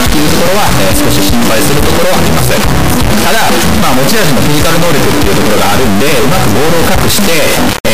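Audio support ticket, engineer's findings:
Integer read as float, whole clip, 0 to 7.9 s. Loud square-wave buzz that snaps to silence in the quietest stretches. Likely component: decoder or file reader treating 32-bit integer samples as 32-bit float, giving near-zero or absurdly large values. Unlike ordinary overdrive clipping, no underlying waveform survives, and level changes don't shape it, only on or off.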